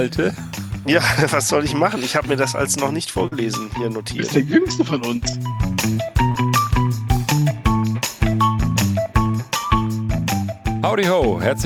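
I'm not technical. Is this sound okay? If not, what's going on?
No. There are three moments of short concealed packet loss, at 3.27 to 3.34 s, 6.32 to 6.36 s and 7.40 to 7.43 s. In each, a small slice of sound, about 20 to 40 thousandths of a second, arrived too late to be played. The receiving end covered the gap by stretching out the sound just before it, then blended back into the real audio. You may hear a tiny smear or wobble, or a brief bit of sound that seems to drop out.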